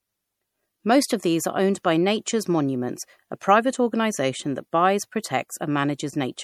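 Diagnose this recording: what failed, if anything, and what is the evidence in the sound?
The codec stage failed. Compression damage is plainly audible throughout the speech: a watery, swirling texture, with metallic chirps on sibilants. This is likely MP3 compression at a low bitrate, around 64 kbps. Weak frequency lines drop in and out between frames. Nothing survives above 20.6 kHz.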